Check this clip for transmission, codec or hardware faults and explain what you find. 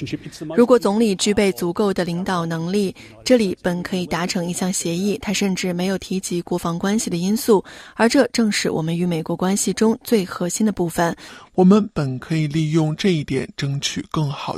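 One fault stands out. From 11.29 s to the end, a section at the wrong speed plays at 0.812 times its recorded rate, likely from being clocked or resampled at the wrong rate. Pitch and tempo drop together, so the sound turns roughly four semitones deeper and audibly slower.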